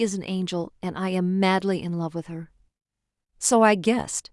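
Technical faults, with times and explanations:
No technical faults can be heard anywhere in the speech recording, and the signal stays continuous and steady across its whole duration.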